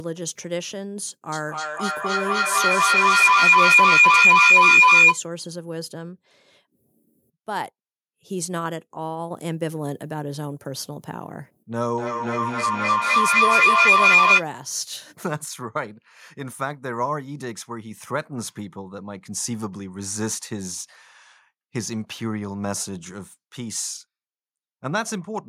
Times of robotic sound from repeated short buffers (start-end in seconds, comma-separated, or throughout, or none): none